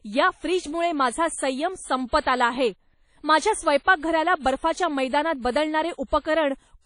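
From start to finish the speech carries plainly audible transform-codec damage, most likely WMA compression. Consonants ring and smear, vowels sound washy, and a thin hiss swells and fades with the level of the speech. The encoder spreads quantisation noise across long blocks and throws away weak spectral detail, which fits a low bitrate around 32 kbps. On a spectrogram everything stops sharply at about 10.1 kHz, and below that the harmonics break into patchy, flickering blocks.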